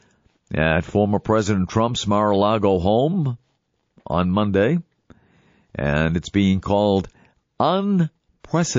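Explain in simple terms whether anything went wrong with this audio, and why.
Two things stand out. Throughout the clip, the speech has the watery, swirly sound of MP3 compression, and the damage is plainly audible. The likely cause is an encoder squeezed for space, throwing away weaker detail that then flickers in and out from moment to moment.

Near the very end, from about 8.40 to 8.44 s, there's pre-echo: a short hiss of about 38 ms just before a sharp onset. The codec spreads its noise across a whole chunk of sound, roughly 72 ms here, so noise meant for the loud attack leaks into the quiet gap before it and smears the attack.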